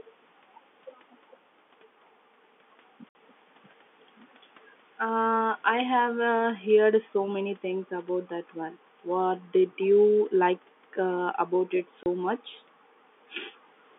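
Packet loss filled with silence cuts the speech at 3.09 to 3.15 s and 12.03 to 12.06 s. The 60 ms and 30 ms holes fit two lost packets, then one. Hard edges bound them, showing as flat waveform gaps and blank spectrogram strips.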